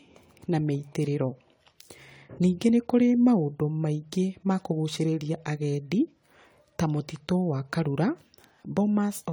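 Throughout the speech, generation loss is audible: a swirly, hollow, smeared quality with blurred consonant attacks, likely from lossy re-encoding around four times, consistent with AAC-LC at about 64 kbit/s. A spectrogram shows flickering holes and smeared transients, with content up to 20.1 kHz.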